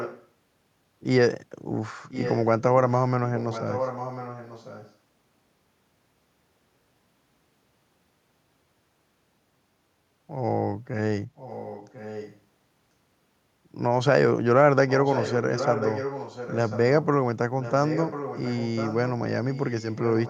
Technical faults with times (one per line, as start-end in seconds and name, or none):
0.00-0.28 echo leak
2.10-2.46 echo leak
3.36-4.94 echo leak
11.36-12.40 echo leak
14.88-17.06 echo leak
17.61-19.10 echo leak
19.51-20.30 echo leak